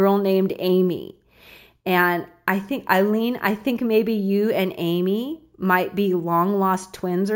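Imaging from sample-and-hold upsampling runs through the whole clip, from the first second to the last. The speech appears to have been raised from 16 kHz to 48 kHz by holding each sample rather than interpolating, so no filter removed the mirrored spectrum. The first image fills the band from 8 kHz to 16 kHz at about 22 dB below the speech, heard as a metallic fizz that rises and falls with the voice and moves against its pitch.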